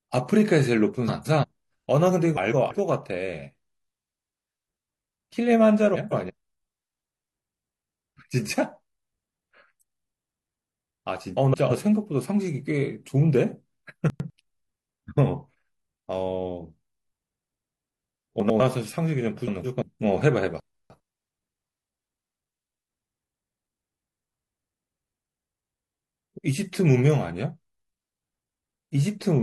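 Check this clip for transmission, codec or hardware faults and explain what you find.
Two transmission faults recur through the speech: frames out of order and chunks out of order.

Frames out of order, at 1.07–1.45, 2.35–2.72, 5.94–6.31, 11.37–11.72, 17.94–18.28 and 19.47–19.83 s: a brief garbled flutter, because two neighbouring runs of about 170 ms, fitting four-frame blocks, swapped places.

Chunks out of order, at 14.1–14.3, 18.4–18.6 and 20.6–21.0 s: a jumbled moment, because a 100 ms chunk played one chunk late, and three chunks late at 20.6 s.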